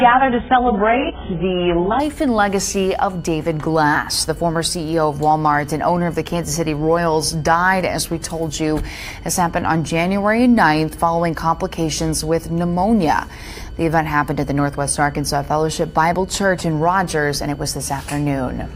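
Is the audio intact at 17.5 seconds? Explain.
No. At 17.5 s there's a switching supply whistle, and it's present throughout the clip, not just at that moment. A switching power supply is running in an audible burst mode, or beating against another supply, so its switching energy ends up in the band you can hear. You get a thin, high whistle wandering between about 1.47 and 1.59 kHz, sitting roughly 35 dB below the main signal. It's faint but persistent once you notice it.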